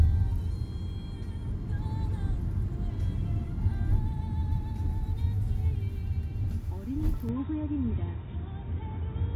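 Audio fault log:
7.29 to 9.35 s, input switched to a poorer device: at 7.29 s the sound abruptly goes dull and boxy, with nothing left above 3.8 kHz, and it stays that way to the end. There's no gap at the change and the loudness barely moves, but a faint new noise floor appears well below the signal. The likely cause is the input jumping to another microphone or a headset's call profile, whose narrower band and own noise replace the original path.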